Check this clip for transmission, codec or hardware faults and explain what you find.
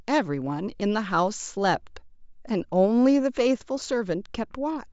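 No transmission, codec or hardware faults can be heard in this speech recording. Nothing in the audio calls for further explanation.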